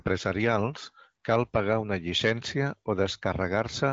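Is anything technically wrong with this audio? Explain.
No, nothing stood out as technically wrong on listening to this speech.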